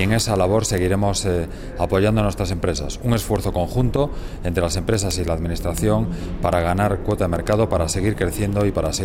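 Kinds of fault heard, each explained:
word clock ticks: sharp clicks about every 70 ms throughout, pointing to an unlocked receiver clock off by roughly 300 ppm, slipping one sample each time.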